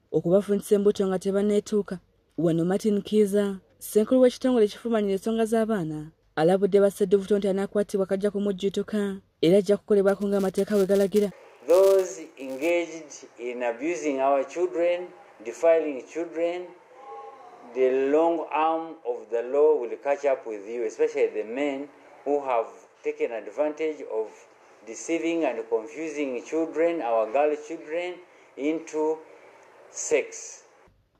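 From 10.1 s to 12.7 s, a filter restarted on every block. It lost its stored state and began each block from silence. Each restart left a small click. These clicks arrive about every 5 ms, so they fuse into a 200 Hz buzz that rises and falls with the sound's level.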